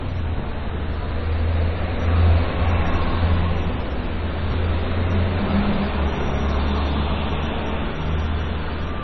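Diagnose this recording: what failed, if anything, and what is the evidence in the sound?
Codec stage: throughout, the treble stops dead at 5.9 kHz and the sound turns watery and swirly. That points to heavy MP3 compression, likely at about 24 kbps. Analogue dullness rolls off gradually rather than at a fixed edge.

Storage or buffer stage: at 4.50 to 4.54 s, a 20 ms chunk plays one chunk late, causing a jumbled moment. These are chunks out of order, not a dropout, because no audio is missing.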